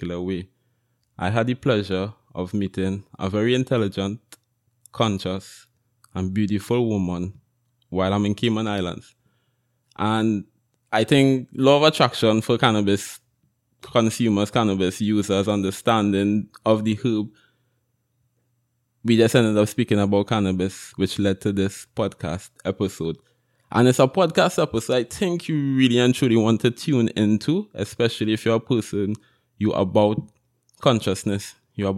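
Speech recording with no audible technical faults, with no dropouts, clicks, clipping, distortion or level problems anywhere in it.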